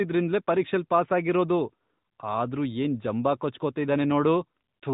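A speech clip carrying the sound of the AMR narrowband mobile codec from start to finish. Nothing above 4 kHz survives, pointing to 8 kHz sampling. The voice is plainly buzzy and synthetic, as coarse pulse-driven vocal-tract modelling leaves audible damage, which fits AMR-NB at about 10.2 kbps.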